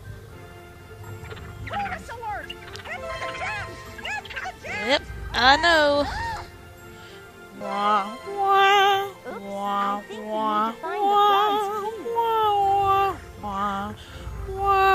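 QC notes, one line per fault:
1.39, 6.46, 7.61, 9.30, 12.15 and 13.43 s, compressed frames skipped: at each point the audio jumps ahead with a short smeared blip, not a hard click. About 0.2 s goes missing at 1.39 s, roughly 0.1 s at 7.61 s, around 70 ms at 6.46 and 13.43 s, and about 30 ms at 9.30 and 12.15 s. Whole compressed frames never reached playback, so each gap matches whole multiples of the 26.1 ms frame. The overlapping neighbour frames blend across the join, which softens it into a blip.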